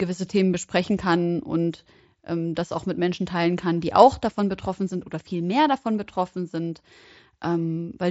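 Speech carried over a wideband Bluetooth headset link, its bandwidth topping out near 8 kHz as mSBC would give, with no technical faults heard anywhere in the clip.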